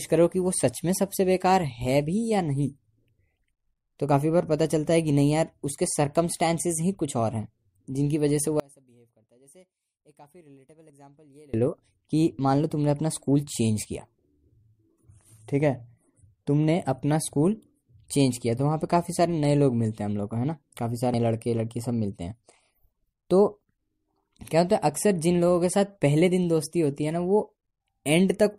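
From 8.60 to 11.54 s speech drops about 31 dB in mono, likely one channel inverted cancelling the centre, leaving a faint waveform and spectrogram.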